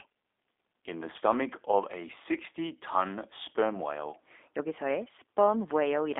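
From start to finish, the speech carries G.729 codec damage, plainly audible. The line band runs about 300 Hz to 3.6 kHz, with nothing above 3.7 kHz. Speech is rebuilt from a filter, a pitch predictor and sparse pulses at 8 kbit/s. It sounds rough, thin and slightly synthetic.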